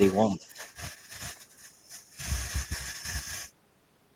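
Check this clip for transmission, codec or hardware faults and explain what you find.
One fault is audible: speech suppressed in double talk, from 0.25 to 0.57 s. The speech dips by roughly 15 dB, likely because an echo canceller mistook overlapping talk for echo. A dropout falls to silence, but this speech is only turned down.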